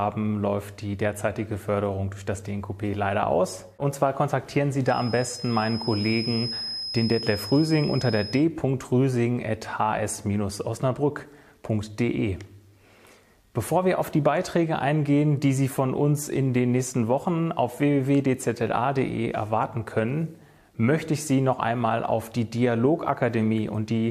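From 4.82 to 8.46 s a feedback whistle sits behind the audio: a thin, steady tone at 5.1 kHz, roughly 10 dB below the main signal, swelling and fading slowly in level. The likely cause is a loudspeaker-to-microphone loop held just at the edge of feedback. Unlike runaway howl, it never builds into a howl, and unlike an electrical whine it breathes slowly in level and stays on one high pitch.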